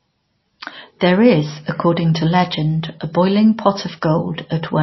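Throughout the speech, plainly audible codec damage gives a watery, swirly texture, and nothing is present above 5.8 kHz. This is likely MP3 compression at a bitrate that sounds close to 24 kbps: starved of bits, the encoder drops weak frequency lines and cuts the treble.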